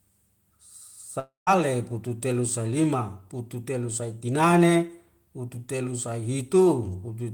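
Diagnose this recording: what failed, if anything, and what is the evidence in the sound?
Network stage. At 1.19 s the speech breaks off. The last sound is carried on as a fading buzz, then about 150 ms of silence. Speech returns at 1.49 s with about 280 ms gone. This is likely a long network dropout that the receiver papered over.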